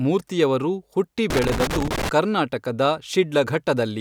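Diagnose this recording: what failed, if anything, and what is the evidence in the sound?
The failure is in the analogue wiring: loose connector crackle. Just after "ಮೂರ್ತಿಯವರು ಹುಟ್ಟಿ", from 1.30 s to 2.09 s, the speech is broken up by an irregular burst of crackle and scratching. A worn or dirty contact is making and breaking as it shifts. Each break chops the signal. Any DC present on the line turns those breaks into pops. The burst lasts under a second.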